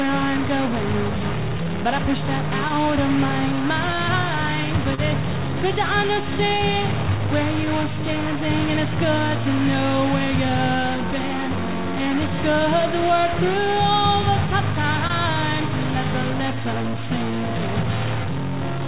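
A distortion rides on the whole recording, and the quiet gaps fill with noise instead of falling silent. This is likely a stuck bit: one data bit held at a fixed value pushes about half the samples off by that bit's weight, and it flips with the sign of small values near silence. The timing is also unsteady, because of clock drift between sender and receiver. The sender's clock runs roughly 2% slow, so the receiver's jitter buffer keeps draining. To hold it level the receiver makes repeated timing corrections, repeating short pieces that are heard as slight hiccups and a dragging tempo. These run from 0.29 to 3.63 s at 99% speed, adding about 50 ms. They run again from 6.22 to 14.48 s at 98%, adding about 150 ms, and from 16.32 to 18.87 s at 98%, adding about 70 ms. Twice the buffer ran empty and caused a short stall from a late packet. At 4.95 s the last sound is held for 30 ms, and at 15.07 s it is held for 25 ms. 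Nothing is lost because playback resumes at the same point. All of this passes through a G.711 mu-law call path at 64 kbps, which leaves nothing above 4 kHz.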